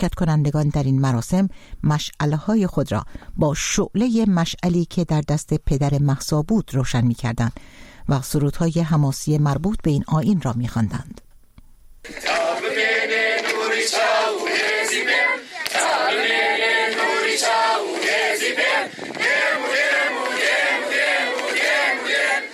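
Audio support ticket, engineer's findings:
No faults found on listening through the clip. Nothing audible points to any component in the path needing attention.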